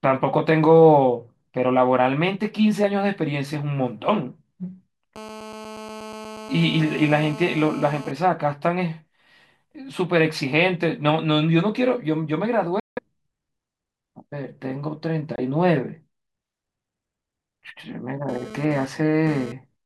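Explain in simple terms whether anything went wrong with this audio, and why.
A harsh, raspy buzz sits under the speech from 5.16 to 8.11 s, steady throughout, and returns from 18.29 to 19.52 s, this time flickering on and off. This is GSM phone buzz: a nearby 2G phone's radio bursts, 217 per second, get picked up by the audio circuitry, steady during a call, intermittent while sending data.

The speech briefly vanishes twice, from 12.80 to 12.99 s and again at 15.36 s for a few hundredths of a second, then carries on as if it never stopped. These gaps are likely Bluetooth dropouts, where audio packets reached the headphones too late and were discarded.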